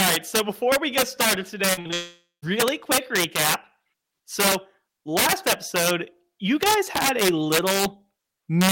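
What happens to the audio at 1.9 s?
Packets stopped arriving reliably just after "we get started today", causing repeated packet loss from 1.73 to 1.94 s. Four separate gaps opened, the longest 40 ms, and each was covered by stretching the preceding sound before the next hole arrived. About half of that span is concealment rather than real signal, and 120 ms of audio is lost outright. The result is a choppy sound with fragments missing.

At 1.94 s this turns into a long network dropout, likely a stall in the connection, lasting until 2.44 s. Nearly half a second of audio, 480 ms, never arrived. The receiver extended the last sound into a fading buzz or hiss, and about 170 ms of that stretch ends in silence. The audio returns at "quick recap", and the lost section is simply gone.

Across the whole clip, including this moment, an integer overflow is also present. The signal was driven about 9 dB past the largest value the integer format can hold, and instead of being limited, those samples wrapped around to the opposite extreme. 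Only a small fraction of samples exceed the limit, but each one flips across the full range. Loud peaks therefore break into harsh, violent cracks that are much sharper than ordinary clipping.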